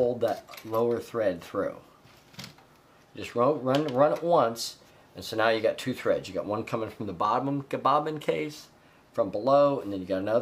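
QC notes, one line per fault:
Nothing to flag here; I listened all the way through and didn't hear a single problem worth a line.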